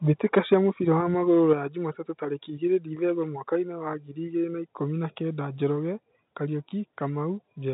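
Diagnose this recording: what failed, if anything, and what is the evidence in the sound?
A harsh, crackling edge sits on the loudest stretch from 0.37 to 0.54 s, where the peaks are flattened about 4 dB past the converter's limit, on around two percent of samples. This is microphone overload at the converter stage, likely from input gain set too high.

The level of both speech and background drops abruptly three times: at 0.54 s by about 2 dB, right after that distorted peak; at 1.53 s by about 5 dB; and at 5.76 s by about 2 dB, just after "na ikũmi na kenda". This is the microphone volume stepped down in call processing, likely an automatic gain control lowering the device input after finding the microphone too loud or clipping. The narrowband telephone character of the G.711 path shows no obvious added damage.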